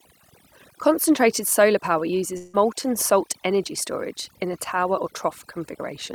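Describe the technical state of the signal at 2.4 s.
At 2.4 s the sound breaks off after "solar power" from 2.37 to 2.55 s. A long network dropout is the likely cause. The gap is filled with a fading continuation of the last sound before "salt energy storage in" resumes. Overdone noise removal runs throughout. Bands near the noise floor are pulled down. The background drops and breaks up into twinkling specks.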